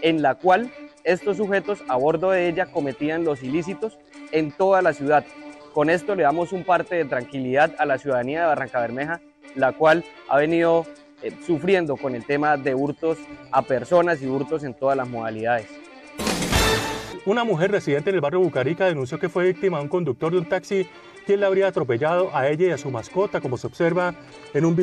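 No technical faults are audible.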